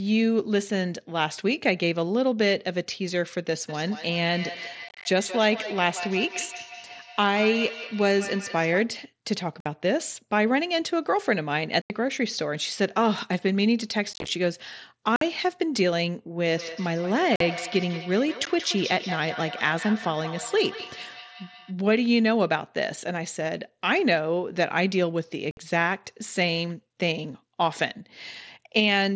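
Feedback echo between two devices appears from 3.69 to 9.0 s and again from 16.49 to 21.8 s. Two devices in the same room share the call, and one plays back what the other's microphone sent. That microphone picks up the playback again, and neither echo canceller removes sound played by the other device. Each phrase returns about a fifth of a second later, thinner and more ringing, and the repeats peak at about 13 dB below the speech.

Unconcealed Bluetooth headset packet loss opens holes in the speech at 4.89, 9.60, 11.82, 14.13, 15.16, 17.36, 18.45 and 25.51 s. The losses at 17.36 and 18.45 s fall inside the second echo span. Short voice packets between headset and phone went missing, and nothing filled the gaps, so the sound cuts off with hard edges. The losses range from 15 ms to about 112 ms. At 4.89 and 14.13 s the losses are scattered across about 150 to 165 ms, which gives a rough, chopped crackle. 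The mSBC link carries speech up to 8 kHz.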